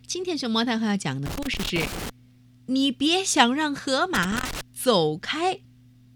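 Speech, interrupted twice by loose connector crackle. The first burst runs from 1.26 to 2.10 s, the second from 4.15 to 4.61 s. A worn or dirty contact keeps making and breaking. That chops the signal into irregular scratchy crackle.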